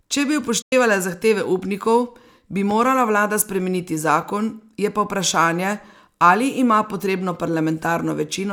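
At 0.62 s the speech cuts out in a digital broadcast dropout. The receiver muted after failed frames, with a quick fade of about 8 ms, and roughly 96 ms of speech is lost, which fits three missing frames. The waveform shows a flat gap and the spectrogram a clean vertical blank until 0.73 s.

From 2.71 to 2.73 s a single loud pop sits on top of the speech, which continues underneath. It peaks a few decibels above the speech and was likely caused by a sudden voltage step such as a switch or plug transient. It appears as one sharp waveform spike and a thin broadband vertical stripe.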